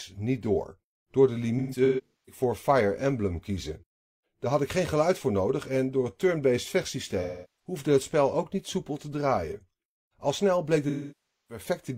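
AAC frame loss with concealment hits the speech at 1.59–2.41 s, 7.22–7.76 s before "het spel ook niet", and 10.89–11.64 s after "snel bleek". The decoder rebuilds missing frames from the last good spectrum. Where a gap is short, the patch sounds smeared, noisy or phasey.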